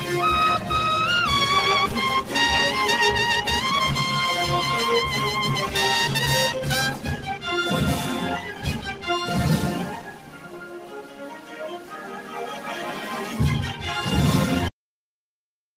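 Throughout, a noise suppressor applied to music or sounds treats sustained material as noise, so levels pump by around 10 dB; unlike compression, attacks pass while held tones sink. The suppressor cuts the sound harder from 6.92 to 7.44 s, 8.47 to 9.04 s and 9.99 to 12.36 s, with dips of about 7, 6 and 7 dB. Decays shorten and sag rather than dropping out entirely. At 14.68 s a cut-off end occurs: the last buffers never played, so the audio stops mid-sound into digital silence with no decay, unlike a fade.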